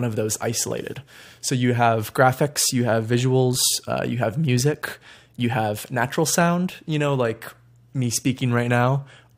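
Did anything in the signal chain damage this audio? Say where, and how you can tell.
No, nothing in the signal chain has damaged this speech recording. There is no point in the clip where the sound can be heard to break up, drop out or change character.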